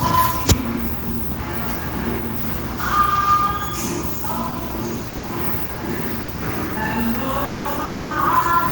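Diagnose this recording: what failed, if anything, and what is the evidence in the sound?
Network: short stalls from late packets at 5.09, 5.17, 5.65 and 6.23 s. The sound is held for 30 to 60 ms while the jitter buffer runs dry, then resumes intact.

Network again: call audio freezes at 7.45 to 7.67 s and 7.85 to 8.13 s, where the sound smears into a fading buzz for 200 and 260 ms. The likely cause is packets stuck in transit.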